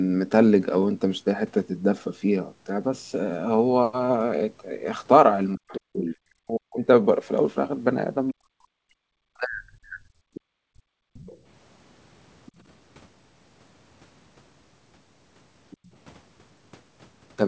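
From 5.54 to 6.81 s the speech falls away in pieces, with the deepest dips around 40 dB and about a second lost in total. The likely cause is speech suppressed in double talk: with both ends talking at once, the echo canceller could not tell this talker from the loudspeaker echo and pulled the whole microphone signal down. Inside that stretch, from 5.68 to 6.16 s, a second voice sits roughly 10 dB under the talker, which is likely the other side's voice leaking through. The loudspeaker playback probably reached the microphone and was not fully cancelled, so it comes through under the main speech.

A second, longer suppression runs from 8.33 to 10.28 s, again with drops of about 40 dB and roughly one and a half seconds lost. Within it, at 8.76 to 8.86 s, the background is gated by the echo canceller. The canceller clamped the microphone hard while the loudspeaker played, so the room sound drops by about 37 dB for a tenth of a second before it returns.

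Right after that suppression, from 10.34 to 11.38 s, the far voice likely leaks through again, this time about 20 dB down and faint. Overlapping it, from 10.56 to 11.14 s, the canceller gates the background once more, by about 36 dB for around half a second. The room tone drops out and then comes back when the canceller lets go.

Two further leaks are very quiet. The one from 12.46 to 12.52 s is a brief scrap roughly 30 dB down. The one from 15.7 to 15.89 s is about 25 dB down. Both are likely uncancelled loudspeaker echo slipping past the canceller.

Throughout the clip the audio stops at 8 kHz. That fits the call's microphone processing and a G.722 codec at 64 kbps.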